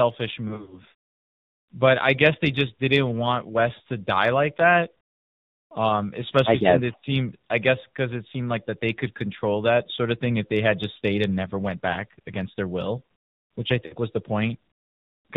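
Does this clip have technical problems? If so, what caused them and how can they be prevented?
Yes. The whole clip carries the sound of the AMR narrowband mobile codec. Nothing above 4 kHz gets through, so the speech is dull and boxy, and the codec damage is plainly audible as a buzzy, synthetic edge. That fits a low AMR-NB mode of about 7.4 kbps, where too few pulses per subframe drive the vocal tract model to rebuild the sound faithfully. Prevention: carry the call in AMR-WB or a higher AMR-NB mode.

Lost AMR speech frames cause three dropouts. From 0.48 to 0.81 s there is a cluster of short gaps spread over about 240 ms, the longest lasting 60 ms. Between "especially since it" and "I guess because it", near 6.99 to 7.04 s, a 40 ms hole fits two lost frames. Between "their will which I" and "was the", at 13.86 to 13.95 s, 60 ms go missing. Each time the decoder repeats its last pitch and vocal tract settings at falling gain, which produces a brief smeared warble and dip. 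Prevention: improve radio coverage or add stronger channel error protection so fewer frames fail their checksum.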